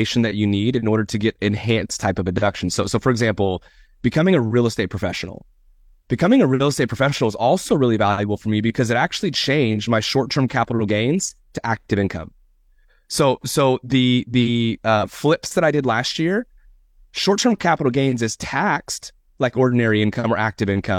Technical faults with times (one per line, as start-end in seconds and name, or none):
none